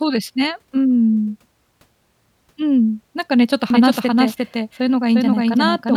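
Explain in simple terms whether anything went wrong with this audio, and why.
At 3.70 s the speech suddenly gains a second copy of itself. This is a doubled audio track. The copy trails the original by roughly 0.4 seconds and is about as loud. It has no fade or room sound, so it sounds like a sharp, clean repeat rather than an echo. It starts abruptly and runs to the end of the clip. The likely cause is the sound being recorded twice, once through a slower route.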